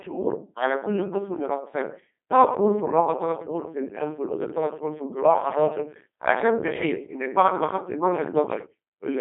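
From start to end the speech passes through the Codec 2 vocoder, and the damage is heavy. Instead of carrying the waveform, the decoder rebuilds each voice from sine waves using only pitch, voicing, energy and a spectral envelope, so the speech turns robotic and buzzy. Nothing survives above 3.5 kHz or below 250 Hz, and the coarseness points to a rate near 2.4 kbit/s. A plain narrowband telephone line would sound muffled but keep a natural voice. This synthetic buzz does not.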